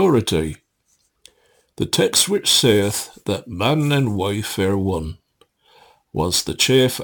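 Sample clock jitter runs through the audio. An unsteady converter clock adds a hiss about 20 dB below the signal, swelling on loud, bright passages, which suggests roughly 7 microseconds of timing wobble.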